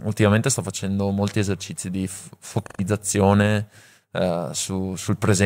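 Speech clip with AAC frame loss with concealment from 2.64 to 2.81 s: about 128 ms of lost frames, filled from the last good spectrum, giving a smeared, noisy patch.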